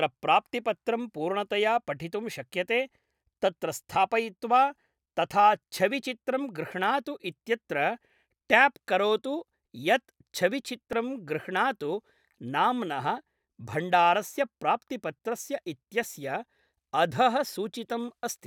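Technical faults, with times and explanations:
10.93 s, repeated buffer: new audio reached the output late, so the device replayed its last block twice more. Each copy lasts 1.33 ms, which fits a 64-sample buffer, so the hard joins sound like a brief click, and a few milliseconds of speech are lost.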